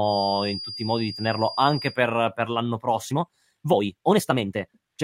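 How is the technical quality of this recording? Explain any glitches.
The recording has two technical faults, one at the start and one at the end.

Feedback whistle, 0 to 2.0 s: a thin, steady tone near 4.8 kHz sits roughly 15 dB under the speech, wavering slightly in level. It is likely a loudspeaker-to-microphone loop held just at the edge of feedback, sustaining one frequency without building.

Time-stretched section, 3.02 s to the end: the speech suddenly runs about 1.79 times faster while its pitch stays put, sounding rushed. This is likely software compressing the audio to fit a length, dropping short slices to preserve pitch.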